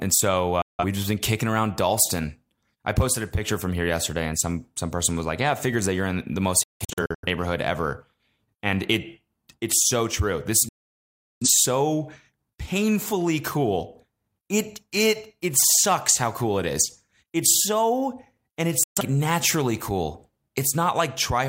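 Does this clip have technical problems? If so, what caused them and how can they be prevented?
Yes. Four digital broadcast dropouts mute this speech where the receiver lost frames and faded out within a few milliseconds: 0.62–0.84 s before "just been kicking around", 6.63–7.27 s in short scattered holes after "you're in the most", 10.69–11.48 s, and 18.83–19.02 s before "naturally cool". A stronger signal or better-aimed antenna prevents them.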